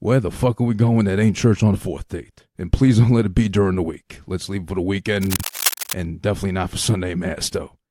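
Cable scratch noise runs from 5.23 to 5.94 s, dense uneven crackling almost as loud as the speech, likely from a worn cable or connector being moved. Frames out of order appear at 5.36 to 5.43 s, inside the scratching. Two neighbouring 32 ms blocks play swapped, giving a brief garbled flutter.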